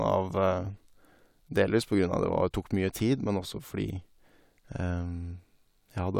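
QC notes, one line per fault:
Nothing to flag on this speech recording; I heard no problems anywhere.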